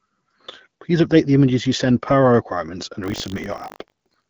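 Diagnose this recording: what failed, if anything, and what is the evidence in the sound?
Buffer tearing at the driver or buffer stage. From 3.02 s, just after "per our requirements and", to the end of the clip at 4.30 s, the audio carries a steady robotic buzz at 50 Hz that is present only while there is signal, which fits a 20 ms buffer period. The writer and the hardware read pointer have drifted into overlap, so a small slice of each period, well under a tenth, replays audio from about 70 ms earlier, with hard joins on both sides. The clip's band-limited wideband-codec sound is not part of this fault.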